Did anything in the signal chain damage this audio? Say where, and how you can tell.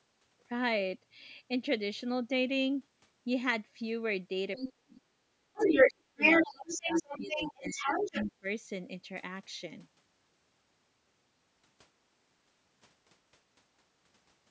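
Yes. A second voice intrudes at 4.56–4.71 s and, louder than the speech, at 5.54–8.32 s: the other side's voice leaking through, likely uncancelled loudspeaker echo.

The speech itself drops by about 35 dB at 4.71–5.18 s and 25 dB across 5.56–8.46 s: speech suppressed in double talk, likely the echo canceller ducking both sides.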